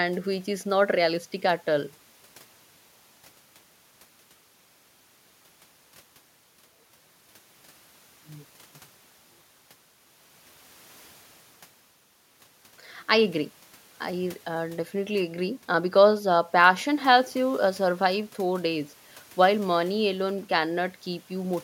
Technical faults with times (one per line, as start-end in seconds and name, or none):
none